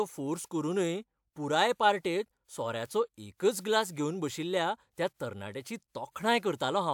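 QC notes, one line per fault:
1.59 s and 2.86 s, bit error spike: a single flipped bit pushes the sample value up or down by a power of two for a few samples at 1.59 s and for one sample at 2.86 s. Each is heard as a sharp tick unrelated to the speech. On the waveform it appears as an isolated needle, and on the spectrogram as a thin vertical line across all frequencies.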